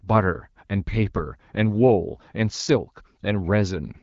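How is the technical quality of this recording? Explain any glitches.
No glitches can be heard in the speech, which comes through an AMR wideband (HD Voice) codec at 12.65 kbit/s with only light coding traces and nothing above 7.5 kHz.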